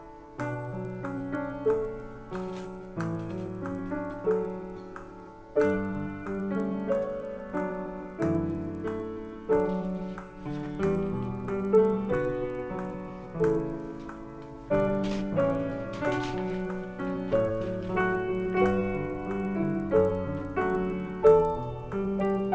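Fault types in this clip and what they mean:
Resampler restarted on every block: each 50 ms block is converted from 24 kHz to 16 kHz in isolation, leaving a small error at every block edge, heard as a 20 Hz ticking buzz under the sound. A spectrogram shows evenly spaced thin vertical lines, and the waveform shows tiny steps.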